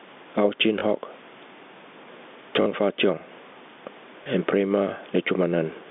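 Throughout the clip there is gain pumping. The level swings by around 10 dB as the gain is pulled down on loud sounds. Loud and quiet syllables sit close together, so the speech sounds squashed within the narrow telephone band. The likely cause is input gain set far too high, with a fast limiter or compressor pulling it back down on every peak.

At 0.8 s, 2.62 s and 4.24 s there is packet loss with the last packet repeated. The spots at 0.8 s and 4.24 s are small blips, and the one at 2.62 s is a short robotic stutter. The events at 0.8 s and 4.24 s last 20 ms, and the one at 2.62 s lasts 40 ms, which fits two consecutive 20 ms packets going missing. The receiver filled each gap by replaying the previous chunk of audio. The longer run at 2.62 s buzzes at about 50 Hz.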